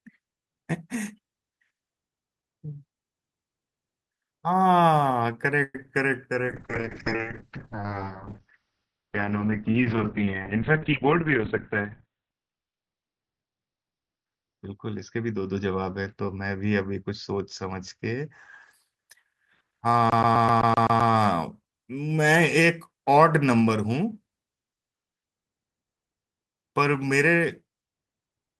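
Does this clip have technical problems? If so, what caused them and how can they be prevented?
Yes. Between 5.63 and 5.89 s there is repeated packet loss with a choppy, robotic sound. Four gaps open, the longest 110 ms, and over half the stretch is filled by stretching the last sound. On a spectrogram this looks like smeared, repeated harmonic bands broken by short blank slivers. Better network routing or stronger forward error correction would prevent it.

From 6.48 to 18.79 s a call bitrate drop takes the encoder from 32 to 9 kbps, and it stays at the bottom for about 6 s. The audio band shrinks from 20 kHz to 4 kHz, so the speech turns muffled and watery. A spectrogram shows everything above 4 kHz cut off sharply. Adequate bandwidth headroom and gentler rate adaptation would prevent this.

Between 10.92 and 12.48 s a jitter buffer speed-up plays the speech at about 107% speed with no change in pitch. 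The receiver removes about a tenth of a second in small pitch-period pieces to cut its backlog. On a waveform the syllables sit slightly closer together. Steadier packet delivery, or slower buffer draining, would prevent it.

From 20.10 to 21.13 s a CD stuck on one turn repeats the same 128 ms of audio eight times, each repeat separated by a brief mute. The waveform shows identical blocks at even intervals, and the spectrogram shows evenly spaced vertical seams. Cleaning or replacing the disc, or ripping it with error-correcting software, would prevent this.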